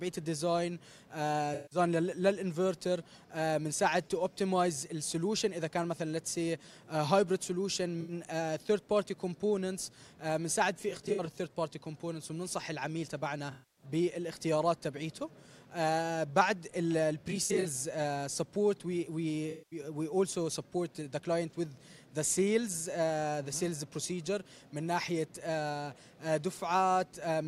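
AAC frame loss with concealment occurs at 1.54–1.79, 8.00–8.12, 10.76–11.37, 13.51–13.85, 17.31–17.66 and 19.50–19.79 s. The decoder loses frames and fills each gap from the last good spectrum, so it smears into a noisy, phasey patch. The solid gaps run 85 to 256 ms. At 10.76 and 17.31 s the losses are scattered, with runs of roughly 70 and 40 ms, and the damage flickers.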